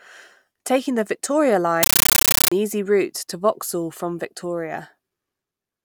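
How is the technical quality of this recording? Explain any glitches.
The recording has one clear glitch. From 1.83 to 2.52 s there's a compressed stream played as audio: a Dolby Digital (AC-3) bitstream, possibly 640 kbps, went out undecoded as raw samples. You get loud chattering static, 13.3 ms noise bursts repeating 31.25 times a second, replacing the speech.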